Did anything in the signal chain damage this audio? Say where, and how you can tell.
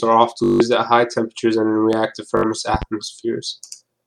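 Yes. Bluetooth stutter at 0.44 to 0.60 s and 2.37 to 2.43 s shows damage at the wireless link. The receiver repeated a short slice of its last buffer, giving a machine-gun buzz. About 160 ms went missing in the first burst, which fits roughly eight lost packets, and about 61 ms in the second. Then the speech resumes further on.

Loud pop, once at 1.93 to 1.96 s and twice in quick succession at 2.74 to 2.85 s, peaks about 10 dB above the speech, which continues underneath. These sharp thumps point to the analogue wiring stage, likely a voltage step from a plug, switch or static discharge.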